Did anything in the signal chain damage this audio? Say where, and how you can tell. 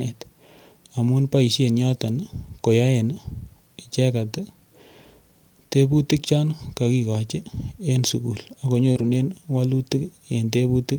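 Yes. At the network stage, around 8.91 to 8.97 s, there is a short concealed packet loss: roughly 40 ms of audio never reached the decoder in time. The receiver covered the gap by extending the preceding sound, continuing its pitch if voiced or using shaped noise if not, then crossfading back into the real signal. You hear it as a brief smear or wobble, and a short sound in that window can drop out.

Overlapping and just after, from about 8.95 to 9.05 s, is a lost packet rebuilt from error correction. Here the decoder recovered the losses from the low-bitrate redundant copies that Opus in-band FEC carries in each following packet. About 60 ms was rebuilt this way, which fits three 20 ms frames. There is no gap, but those frames sound coarser and noisier than the surrounding audio because the copies carry less detail than the original packets.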